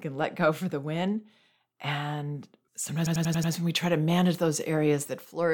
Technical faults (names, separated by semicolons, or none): system hang loop